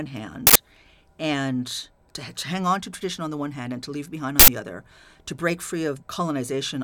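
Speech, twice disrupted by an uninitialised buffer: playback read a block before audio was written into it, so stale memory came out as samples. Each event is a loud burst of digital noise lasting about 85 ms, which fits a 4096-sample buffer, at 0.47–0.56 s and 4.40–4.48 s, between "and to leave behind" and "other to break".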